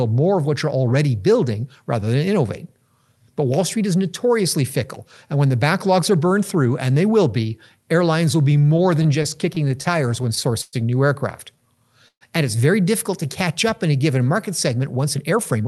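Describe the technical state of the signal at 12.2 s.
At 12.2 s the signal is inside a call audio freeze running from 12.08 to 12.24 s. The receiver stretched the last sound into a fading buzz or hiss over about 128 ms, and about 80 ms of that is silent. The likely cause is delayed packets draining the jitter buffer. When they arrive, playback resumes where it stopped, adding 128 ms of delay with nothing lost. The Opus path limits the band to 12 kHz around it.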